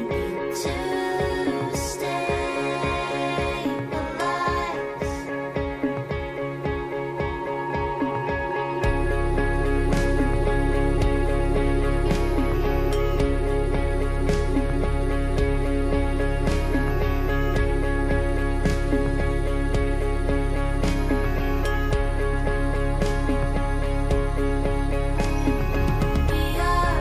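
From 3.13 s to the end there's video or display buzz: a screen or video cable is leaking into the audio, giving a 59.94 Hz buzz with hash on top and a thin 15.7 kHz line-rate whine, sitting roughly 25 dB under the sound.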